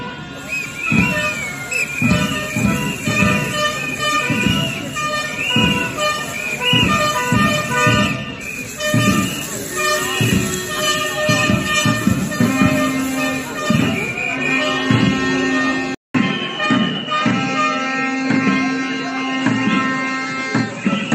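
At 15.95 s the sound cuts out for about 200 ms, then resumes duller to the end, with nothing above 9.3 kHz and a new background noise roughly 30 dB down. The likely cause is an input switched to a poorer device. The loudness stays about the same, but the silent gap and new noise floor distinguish this from a simple filter or codec change.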